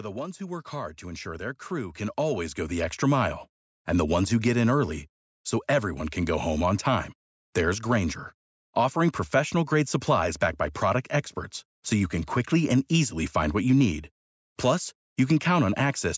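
From 0.38 to 3.36 s there's an automatic gain rising fault: the AGC decided the input was too quiet and pushed its gain up by about 12 dB over those three seconds, so the speech and the background swell up together, with the call's microphone processing leaving nothing above 8 kHz.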